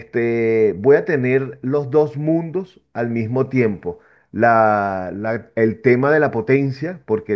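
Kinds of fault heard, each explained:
No technical faults can be heard in the signal: level, continuity and frequency content stay steady and intact throughout the recording.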